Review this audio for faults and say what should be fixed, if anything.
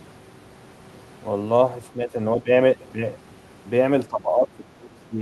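The echo canceller likely could not separate the near talker from loudspeaker echo while both sides spoke, so it pulled the speech down: speech suppressed in double talk. The speech dips by about 10 dB at 1.93–2.14 s and 2.37–2.48 s, then sinks by about 20 dB through most of 4.08–5.2 s. Better double-talk detection, which keeps near-end speech at full level while the far end is talking, would prevent this.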